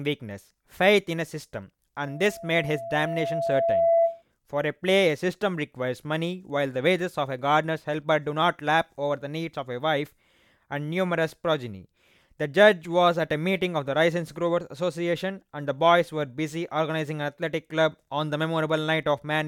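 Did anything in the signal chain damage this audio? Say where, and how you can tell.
Yes. Between 2.04 and 4.23 s a loudspeaker feedback squeal rises out of the speech. At 673 Hz the microphone-to-speaker loop exceeds unity gain. The tone swells over about two seconds to roughly 5 dB above the speech, appearing as a brightening horizontal spectrogram line and a steadily widening waveform envelope.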